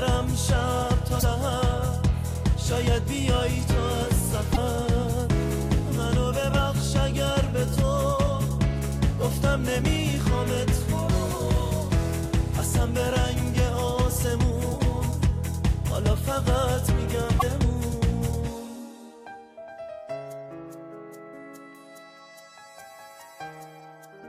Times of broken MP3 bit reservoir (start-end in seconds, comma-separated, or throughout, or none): 1.19-1.23, 4.53-4.58, 17.39-17.43